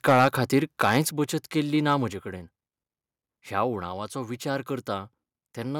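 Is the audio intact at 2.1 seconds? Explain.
No. At 2.13 s the speech and the background behind it drop together in one abrupt step of about 4 dB. This is a microphone volume stepped down event, likely caused by the call software lowering the device's input volume after judging the microphone too loud.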